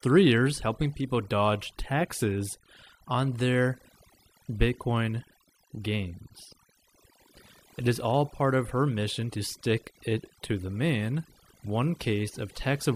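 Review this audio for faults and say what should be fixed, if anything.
Overdone noise removal runs through the whole clip, from start to finish. The denoiser is set so aggressively that any frequency band sitting close to its noise estimate gets pulled far down or shut off entirely. The low-level parts of the speech fall below that line and vanish with the background noise. The background collapses into near silence scattered with twinkling, chirpy specks. Setting a gentler reduction amount, and listening to the speech rather than only the pauses, keeps this from happening.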